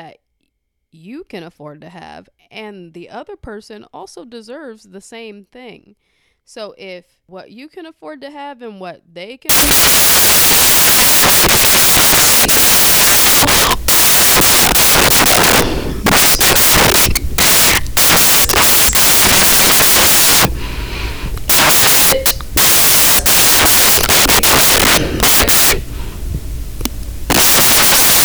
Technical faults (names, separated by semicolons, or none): samples built from the wrong bytes